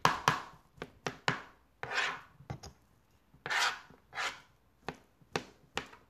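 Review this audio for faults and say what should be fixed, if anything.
Nothing needs fixing: the signal holds steady throughout, with no dropouts, level jumps, distortion or other defects to be heard.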